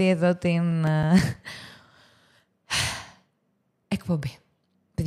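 A short burst of regular ticks runs through the speech from 0.71 s to 1.50 s: six small clicks or momentary dropouts, spaced evenly at roughly seven or eight per second, the longest lasting only a few milliseconds. These are CD scratch ticks. A scratch or blemish on the disc wipes out more data than error correction can restore, once per revolution, so the player patches or silences those samples on every pass.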